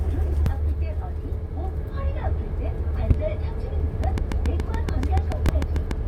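Short chirps and blips break into this recording of everyday sound at 0.46 s, from 3.10 to 3.12 s, and at 5.49 s. This is damaged data in a compressed stream: corrupted bytes made the decoder misread frames, lose sync and jump to the next frame header. From 4.04 to 5.92 s a train of clicks ticks at a steady 7 per second, around fifteen similar pops peaking about 10 dB above the sound, likely from interference or a faulty connection.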